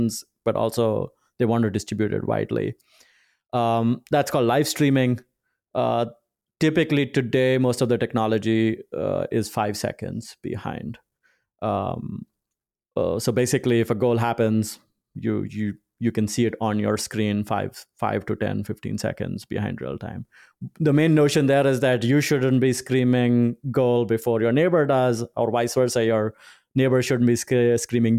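Nothing goes wrong anywhere along the way here; the speech just runs on without a single technical hiccup worth pointing out.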